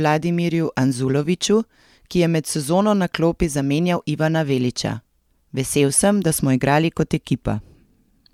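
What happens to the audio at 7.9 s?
Nothing goes wrong at 7.9 s: the audio plays through that moment intact, with no dropout, click or distortion.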